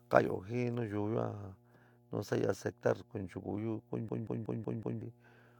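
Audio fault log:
throughout: mains hum. A steady low tone at 60 Hz sits under the speech for the whole clip, about 30 dB below it. Power-line current is leaking into the signal path, most plausibly through a ground loop or a nearby transformer.
4.09 to 5.02 s: system hang loop. The same 186 ms slice of audio plays five times in a row, a stutter at 5.38 Hz. The system stalled while the hardware kept replaying one buffer, which fits an 8192-sample buffer. About a second of real audio is lost.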